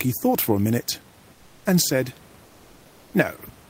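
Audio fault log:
1.33 to 1.65 s, comfort noise in place of the background: right after "thought for a minute" and before "and said", the room's natural background noise gives way for about 320 ms to a smooth, featureless noise about 2 dB quieter, likely because the sender's discontinuous transmission, as in Opus DTX, stopped sending during the pause and the receiver filled the gap with synthetic noise.
2.45 to 3.13 s, comfort noise in place of the background: after "and said", the same flat fill runs for 680 ms, about 1 dB under the real room noise, which otherwise sits about 30 dB below the speech.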